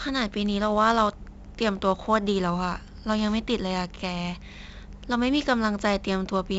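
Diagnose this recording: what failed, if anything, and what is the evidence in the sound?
The codec stage failed: 4-bit ADPCM compression leaves a gritty hiss riding on the speech throughout, heavier on loud syllables, with attacks smeared. A spectrogram shows broadband noise tracking the speech envelope and nothing above 7.7 kHz, which fits 4-bit samples at about 64 kbps.

Wi-Fi interference entered the analogue wiring from 1.44 s to the end. A nearby radio's beacon is rectified into ticks every 102.4 ms, roughly 35 dB below the speech. On the spectrogram these appear as evenly spaced thin vertical lines, and on the waveform as regular small spikes.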